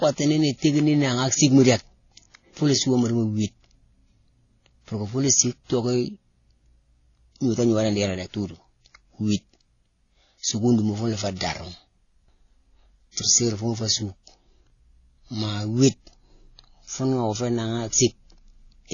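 Transcoding between lossy codecs runs through the whole of this speech clip, with nothing above 6.9 kHz from start to finish and several kinds of coding artefact heard layered together. The likely cause is a chain of low-bitrate encodes, with a sound that fits AAC-LC, then HE-AAC, then WMA at around 32 kbit/s. Each encoder spent its bits on the previous one's damage and added its own, and the lowest band limit survived.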